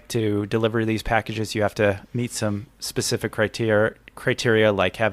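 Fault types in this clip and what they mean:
No technical faults are audible in this speech.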